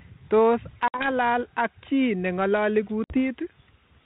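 At 0.88 s the speech drops into a hard-edged hole of about 60 ms, a few packets' worth, and the same thing happens again at 3.04 s. Both are packet loss on an ADPCM call. The gap is filled with silence, and the decoder's adaptive predictor and step size lose track of the sender's, so the sound comes back a bit distorted, settling by about 1.12 s and 3.20 s. The narrowband line underneath fits G.726 ADPCM at 32 kbit/s.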